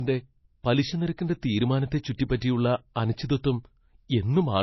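Speech runs dull and boxy for the whole clip, with nothing above 5.8 kHz and a watery, smeared edge on consonants that never clears. That pattern is low-bitrate audio saved at a high bitrate: the speech was likely encoded as MP3 at a rate that fits something near 24 kbit/s, which removed the top end and left those artefacts, then re-encoded as a much larger MP3 that could not restore anything already lost.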